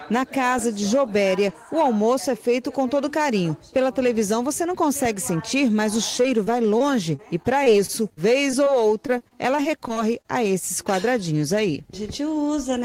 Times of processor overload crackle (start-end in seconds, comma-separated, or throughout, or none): none